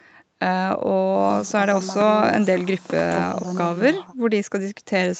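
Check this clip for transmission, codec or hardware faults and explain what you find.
No transmission, codec or hardware faults turn up in this speech clip, which shows only the normal call microphone processing and WebRTC call path with nothing above 8 kHz.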